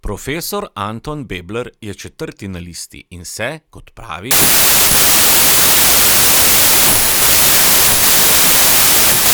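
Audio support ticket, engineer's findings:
Wrong sample width from 4.31 s to end. Reader misparsing stream, likely 32-bit samples read as packed 24-bit. Byte boundaries misaligned, so most values are garbage, some keep the true top bits. Result: loud noise burying the speech, distorted, slowed to 0.75x, pitch lowered.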